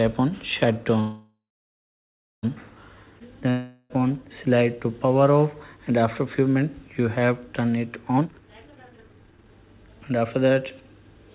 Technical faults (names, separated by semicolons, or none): call audio freeze; long network dropout; jitter buffer speed-up